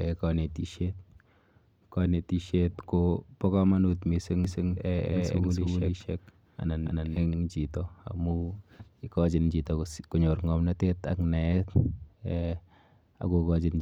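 Speech clip with a doubled audio track from 4.45 to 7.35 s, between "kobo komonut mising" and "chito amu". A dry second copy trails by roughly 300 ms at similar level, cutting in and out abruptly. Likely cause: a slower second capture path.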